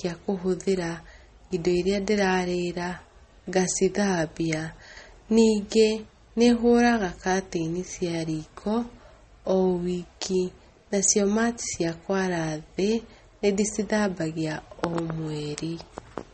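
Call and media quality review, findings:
MP3 compression artefacts, whole clip. Plainly audible. Treble cut hard at 8.4 kHz. Watery, swirly texture, metallic chirps on s sounds. Weak spectral detail flickers frame to frame. Likely a starved MP3 encoder, which fits a 32 kbps encode.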